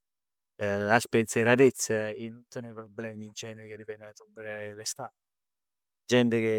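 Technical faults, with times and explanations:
No technical faults are audible anywhere in the speech.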